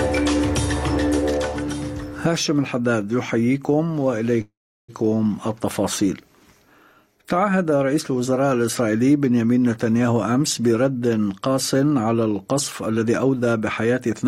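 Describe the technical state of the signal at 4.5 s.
At 4.5 s the last sound is held on as a short fading buzz that drops to silence for about 370 ms, part of a 471 ms pause running from 4.41 to 4.90 s. When the sound returns it picks up exactly where it left off, with nothing lost, just pushed later. This is a call audio freeze, likely caused by packets stalling in transit until the jitter buffer emptied and the receiver padded the wait.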